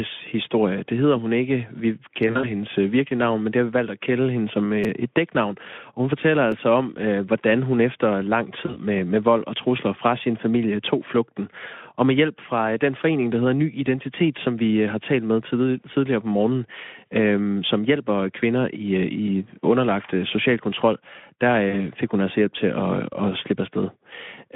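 Around 2.27 to 2.51 s, right before "øh virkelige navn men", there's VoIP packet loss concealed by the speech codec. About 100 ms of speech went missing in short gaps over 160 ms, and the decoder stretched what it had into a fading buzz that stays weak for a moment after. The same thing happens briefly at 8.65 to 8.79 s, between "hvordan hun efter lang" and "med med vold og", and at 21.69 to 21.87 s, with 40 ms gone each time. A repeated buffer shows up at 4.84 s, just after "at kalde hende som". A roughly 5 ms chunk plays twice more, which fits a 256-sample buffer, so you hear a tiny buzzy click. There's a single repeat at 6.52 s. All of this sits on a Speex line at 15 kbps, limited to about 150 Hz to 3.5 kHz.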